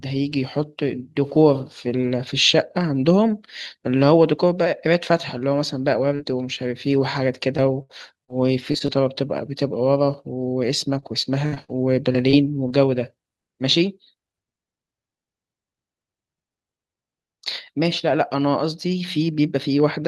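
At 6.15 to 6.21 s the speech briefly smears, with a small wobble where about 40 ms of sound drops out. This is short concealed packet loss. A few hundredths of a second of audio arrived too late or not at all, and the receiver filled roughly 35 ms of the hole by carrying the preceding sound forward before blending back into the real signal.

From 7.57 to 8.90 s the speech turns choppy, breaking up six times, with the longest dropout lasting about 74 ms. The same happens from 11.00 to 12.72 s, with seven breaks and the longest at about 60 ms. Both stretches are repeated packet loss, heard as robotic sound. Data went missing again and again, and each hole was patched by extending the last sound. Concealment covers about 14 percent of the first stretch and 12 percent of the second, so pieces of speech are lost.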